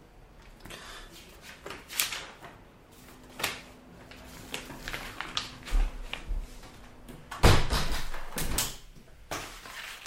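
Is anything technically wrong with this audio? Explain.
Yes. From 7.86 s to the end at 10.06 s there is sample clock jitter. The converter's timing wanders by something on the order of 10 microseconds, so each sample lands slightly early or late. The resulting error is worst where the waveform changes fastest and sits roughly 10 dB below the sound itself, giving a grainy hiss. Unlike steady background noise, this roughness swells on loud, bright passages and disappears in quiet gaps.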